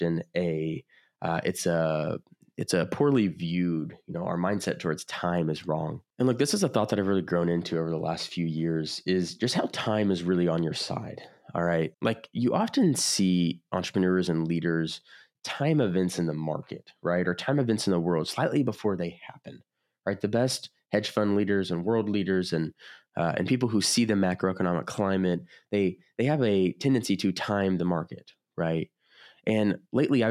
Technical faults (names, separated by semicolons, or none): none